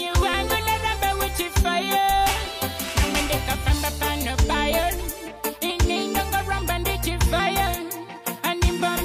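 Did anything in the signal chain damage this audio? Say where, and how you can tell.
No, nothing audible points to damage at any stage of the chain.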